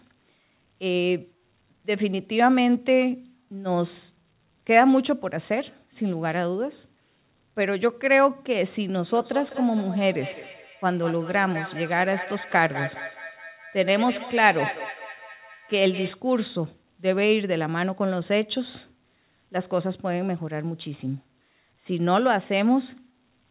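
From 9.09 s to 16.25 s there is feedback echo between two devices: a second device on the same call in the same room plays the far end's audio aloud, and this microphone picks it up and sends it back, which its own echo canceller can't remove. Each stretch of speech comes round again about a fifth of a second later, thinner and ringing, peaking at about 11 dB below the speech, over a narrow telephone-like band that stops at 4 kHz.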